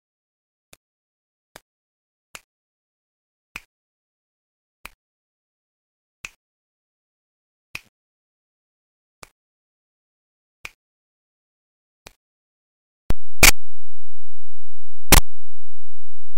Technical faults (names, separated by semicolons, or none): signed and unsigned mixed up